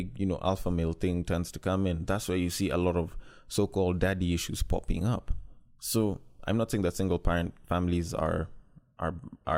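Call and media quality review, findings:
Nothing to flag on this speech recording, no faults turned up anywhere in it.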